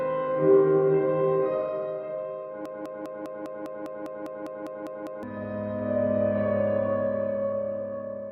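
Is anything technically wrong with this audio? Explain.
Yes. A broken-record loop runs from 2.66 s to 5.23 s. A fragment of about 0.2 s repeats exactly, back to back, 13 times, and whatever sound belonged in that stretch never plays. The likely cause is that the player or stream stalled and kept re-sending the last piece it held. On a waveform it shows as an identical block tiled end to end, and a spectrogram shows the same pattern stamped in a regular 0.2 s rhythm.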